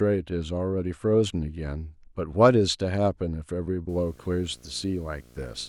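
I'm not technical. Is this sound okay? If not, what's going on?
No. From about 3.89 s to the end of the speech, a low, steady buzz comes in underneath, with a faint hiss-like hash on top of it. It stays quiet compared with the talking. This is video or display buzz: a screen or video cable near the audio equipment leaks its electrical noise into the sound. The buzz repeats 60 times a second, matching the rate at which the picture refreshes.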